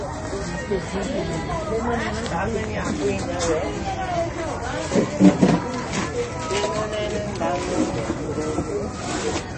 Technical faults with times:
0.00-9.58 MP3 compression

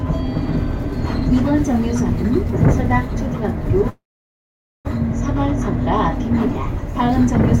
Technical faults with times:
3.89-4.87 call audio freeze

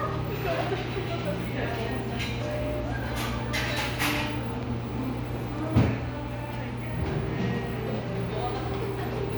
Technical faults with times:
none

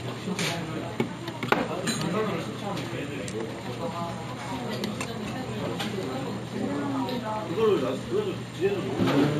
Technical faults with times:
0.00-9.39 imaging from linear upsampling

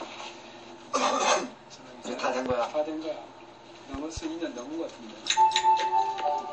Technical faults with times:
0.00-6.52 MP3 compression
2.46-2.53 loud pop
3.94-4.20 loud pop

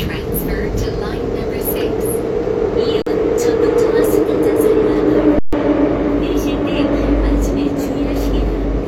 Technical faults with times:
3.02-3.06 underrun with held sample
5.39-5.53 underrun with held sample

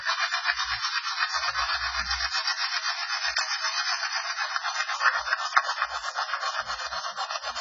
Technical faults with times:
0.00-7.61 AAC compression

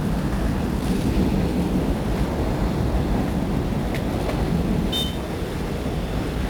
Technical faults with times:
0.00-6.50 1-bit DFPWM compression

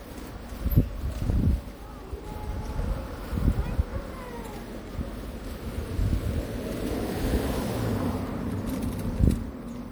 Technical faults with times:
0.00-9.91 generation loss

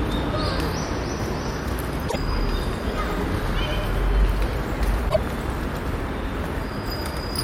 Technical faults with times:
2.08-2.16 broken MP3 bit reservoir
2.82-7.43 doubled audio track
5.08-5.17 broken MP3 bit reservoir

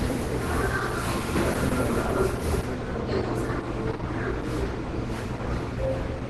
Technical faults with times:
0.00-6.29 Opus compression

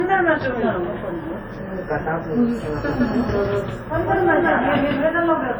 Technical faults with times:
0.00-5.59 low-bitrate audio saved at a high bitrate
2.88-5.06 doubled audio track

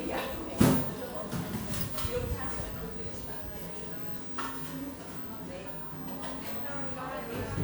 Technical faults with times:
0.00-7.64 generation loss

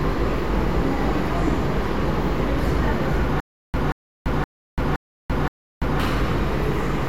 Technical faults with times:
3.40-6.00 stutter with silent gaps

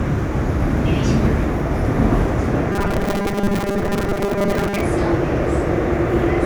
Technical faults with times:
2.72-4.81 robotic sound from repeated short buffers

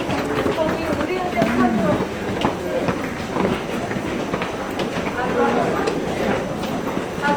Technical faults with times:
0.00-7.36 Opus compression

